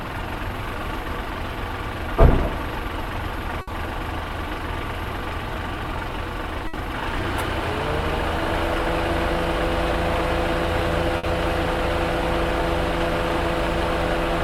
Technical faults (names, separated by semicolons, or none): burst of packet loss